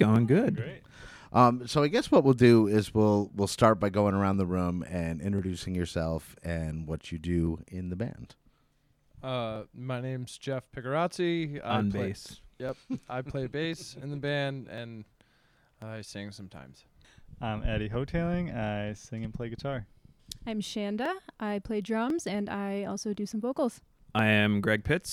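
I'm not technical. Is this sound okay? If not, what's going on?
No. There are clock drift buffer slips from 0.16 to 24.19 s: a click about every 1.05 s, around twenty in all. The likely cause is two devices keeping slightly different time, so a tiny slice of sound keeps getting dropped or repeated.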